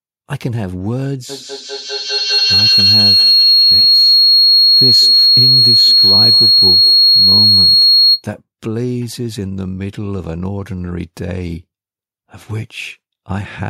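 A high, piercing tone near 4 kHz rises over this speech recording from 1.29 to 8.32 s, with repeats about every 200 ms, and peaks about 10 dB above the talker. This is feedback howl: a microphone-to-loudspeaker loop gaining level with each pass.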